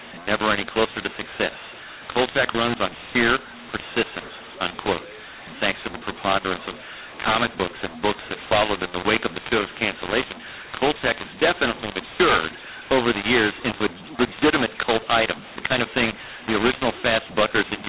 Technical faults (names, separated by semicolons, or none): mu-law and A-law mixed up